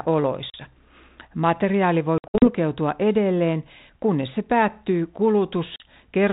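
Speech with packet loss on an ADPCM call: hard silent holes at 0.50–0.56 s, 2.18–2.49 s (several short gaps totalling 160 ms, before "edelleen kunnes se päättyy") and 5.76–5.86 s. Unlike a plain dropout, each hole is followed by briefly distorted speech, as the decoder's predictor resynchronises.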